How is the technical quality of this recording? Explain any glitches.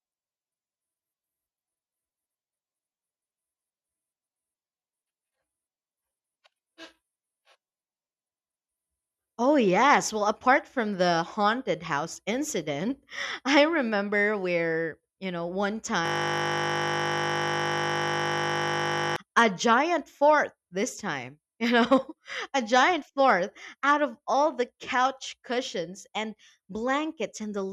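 The speech is interrupted by one serious glitch. From 16.06 to 19.16 s, just after "where you know one" and before "a giant fort this", the audio turns into a steady 50 Hz buzz. That is a system hang loop: the computer froze while the sound hardware kept replaying one 20 ms buffer more than a hundred times.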